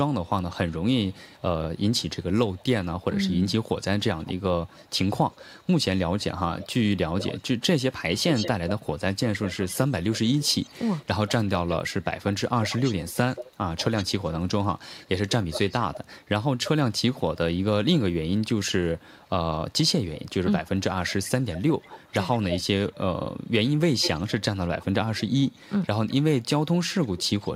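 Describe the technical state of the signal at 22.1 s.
You're in an echo leak, 18.83 to 27.51 s: a faint copy of the speech trails 192 ms behind, likely loudspeaker pickup the far-end echo canceller missed.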